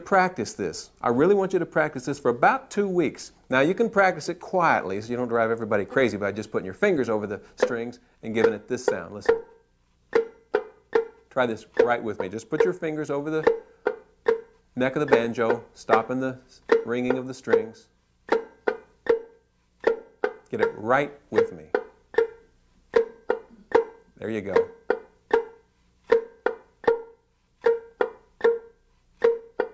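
No technical faults can be heard anywhere in the clip.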